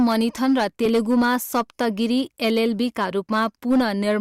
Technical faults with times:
0.00-4.20 hard clipping

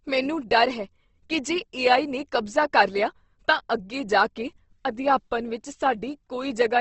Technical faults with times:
0.00-6.80 Opus compression

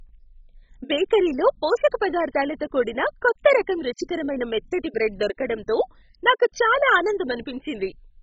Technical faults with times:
0.00-8.22 MP2 compression

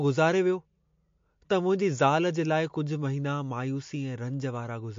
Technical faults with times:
0.00-4.98 MP3 compression

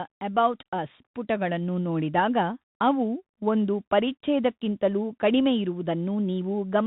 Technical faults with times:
0.00-6.87 Bluetooth CVSD headset codec

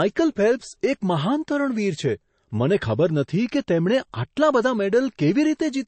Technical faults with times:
0.00-5.87 low-bitrate audio saved at a high bitrate

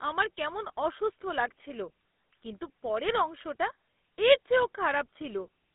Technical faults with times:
0.00-5.74 GSM full-rate codec
5.20-5.48 GSM bit errors

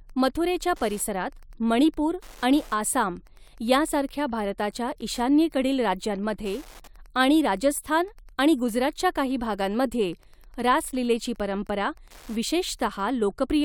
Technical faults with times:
0.00-13.64 Wi-Fi interference

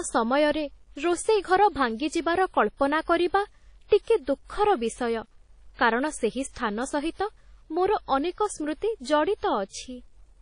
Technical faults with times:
0.00-10.41 low bit depth without dither
0.00-10.41 WMA compression

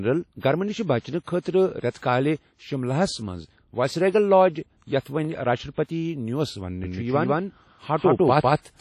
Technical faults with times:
0.00-8.81 WMA compression
1.40-1.45 pre-echo
1.90-2.02 pre-echo
5.00-5.05 pre-echo
6.84-8.81 doubled audio track

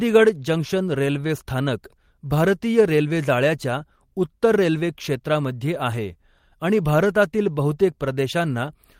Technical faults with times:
none

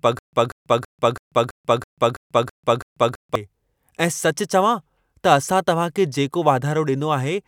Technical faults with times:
0.00-3.35 stutter with silent gaps

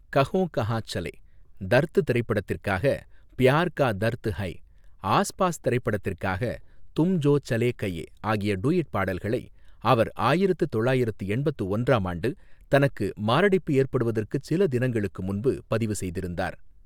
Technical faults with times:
none

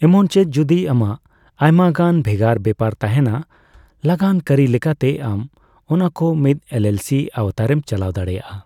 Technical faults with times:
none

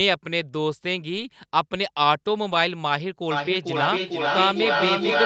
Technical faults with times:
1.13-1.27 lost packet rebuilt from error correction
2.51-2.57 lost packet rebuilt from error correction
3.31-5.25 feedback echo between two devices

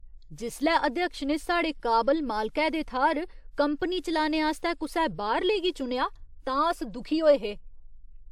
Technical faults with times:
4.59-4.63 pre-echo

